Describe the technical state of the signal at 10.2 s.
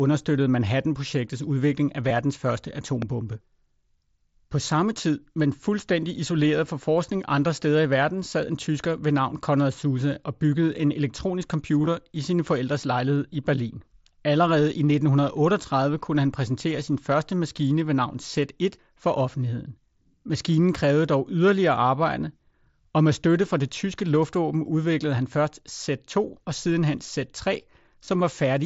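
At 10.2 s the speech comes through intact, carried over the Bluetooth mSBC headset path with no fault at that moment.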